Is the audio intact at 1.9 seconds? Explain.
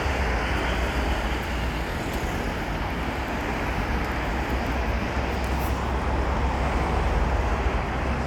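No. From 1.91 to 1.93 s there are repeated frames: a 23.2 ms stretch of audio plays once, then plays again straight away, so the clip gains 23.2 ms. The repeat length fits a single compressed frame being written or sent twice. It sounds like a tiny stutter, a brief hiccup where the same sliver of sound recurs. A dropout, by contrast, would leave a gap or lose material, whereas here nothing is missing and the sound simply doubles back.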